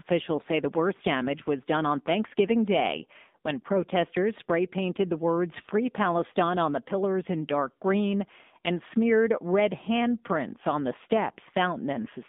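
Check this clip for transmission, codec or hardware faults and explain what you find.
The speech comes through an AMR narrowband mobile codec and shows one short burst of AMR bit errors near the end.

Throughout, the AMR-NB codec at 7.4 kbps confines the speech to roughly 200 Hz to 3.7 kHz and rebuilds it from a vocal-tract model excited by sparse pulses. At this low rate the damage is plainly audible as a buzzy, synthetic texture.

From 11.95 to 12.09 s, AMR bit errors corrupt the weakly protected bits in a run of frames, which fits about seven 20 ms frames. With an error rate of roughly 7 percent, misplaced excitation pulses and wrong gain and spectral values make the speech hoarse and gargly while it keeps its pitch and level.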